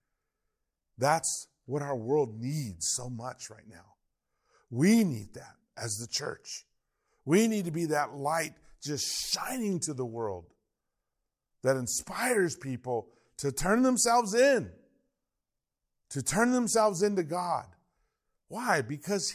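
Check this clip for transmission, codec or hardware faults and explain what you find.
No transmission, codec or hardware faults turned up here.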